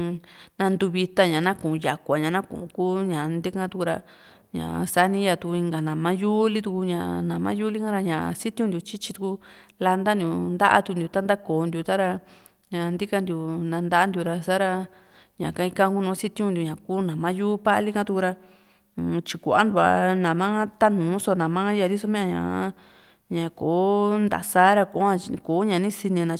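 Nothing in the speech recording points to a technical fault at any point in the signal.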